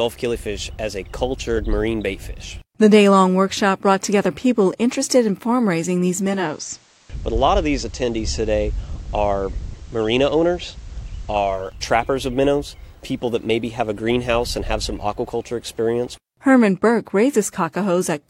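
A hybrid receiver lost its digital stream and fell back to the station's FM broadcast, a case of digital radio blending to analogue between 6.10 and 11.85 s. Each crossfade takes about half a second (488 ms). The level dips by about 2 dB, and a faint hiss sits well below the signal until the digital path returns.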